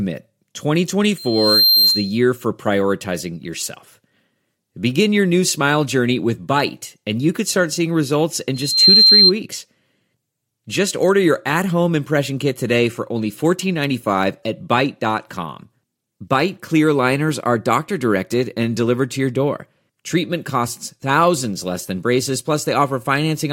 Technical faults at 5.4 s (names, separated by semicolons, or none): none